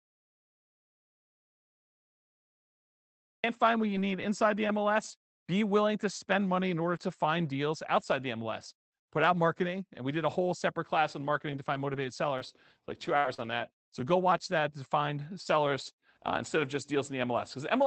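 Audio dropout to silence fills the opening of this speech recording from 0 to 3.44 s. The gap is already under way when the clip begins and is silent with no room tone, most likely because the input was lost and silence kept being written. Lost packets rebuilt from error correction follow at 3.87, 3.95, 4.56 and 4.68 s, each a 20 ms frame. There is no gap at these points, but each frame turns briefly rougher and noisier because the decoder played the low-bitrate backup copy carried in the next packet instead of the original. Scattered short gaps appear between 11.34 and 14.10 s: about three small holes, the longest around 70 ms. The receiver bridged each one by extending the preceding sound, so the speech stays clear apart from brief ticks and smeared hiccups.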